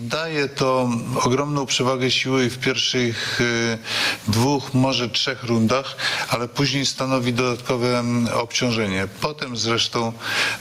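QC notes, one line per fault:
Throughout: gain pumping. The gain swings by around 15 dB, so loud and soft passages sit unnaturally close in level and the whole clip sounds squashed. The likely cause is input gain set far too high, with a fast limiter or compressor clamping down on each peak. Unlike a noise gate, pumping lifts quiet material rather than cutting it.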